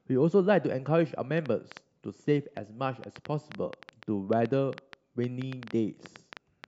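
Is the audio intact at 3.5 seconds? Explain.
No. At 3.5 seconds the speech sits inside a train of clicks running from 1.38 to 6.65 s, likely from electrical interference or a faulty connection or power supply injecting short pulses into the signal. They arrive about 5.5 times per second at an uneven pace, roughly thirty in all, each peaking at about 5 dB above the speech. The result is a sharp, irregular ticking laid over the voice and continuing through the pauses.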